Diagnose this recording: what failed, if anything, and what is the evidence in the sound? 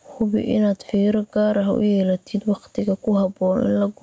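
Gain pumping throughout: the gain swings by roughly 10 dB, pulled down under loud passages, likely excessive mic gain driving a fast limiter.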